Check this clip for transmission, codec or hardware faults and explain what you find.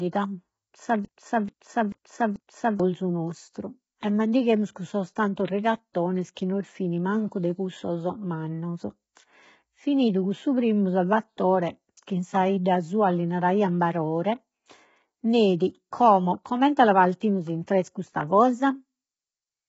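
Two faults are present: a repeating stall early on, and codec damage across the whole speech clip.

From 1.05 to 2.80 s there is a broken-record loop. The player or stream likely stalled and kept resending the last fragment it held, so a 0.44 s piece plays four times back to back. The speech that belonged in those 1.75 s is missing.

Throughout, there is low-delay AAC compression. The speech was likely squeezed through AAC-ELD at a rate the heavy damage suggests is around 16 kbps. Its short frames resolve the harmonics poorly, leaving the speech rough and grainy, with noise between harmonics and nothing above 7.7 kHz.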